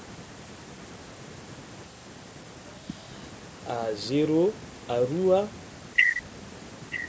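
From 6.9 s to 7.09 s an echo leak, likely from incomplete echo cancellation, replays the speech 0.93 s late and roughly 10 dB quieter, appearing as a faint spectrogram copy of earlier patterns.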